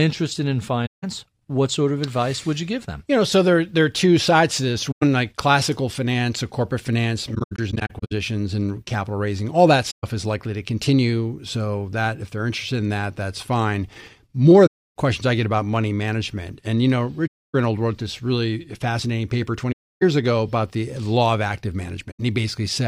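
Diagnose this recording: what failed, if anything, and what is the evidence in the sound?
Codec stage: AAC frame loss with muting. Frames went missing and the decoder zeroed their spectrum, so the overlapping windows fade the speech out and back in, leaving soft-edged gaps. The gaps fall at 0.86, 4.91 (after "two sides to this"), 9.90 (before "is likely to continue"), 14.66, 17.27, 19.72 and 22.11 s. They last 85 to 300 ms, in steps of about 21 ms. Between 7.34 and 8.12 s the losses scatter, with runs up to about 0.1 s.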